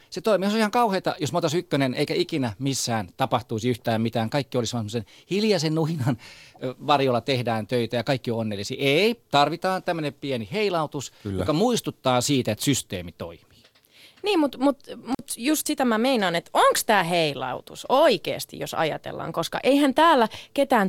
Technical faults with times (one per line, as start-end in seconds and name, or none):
15.13-15.20 intermittent contact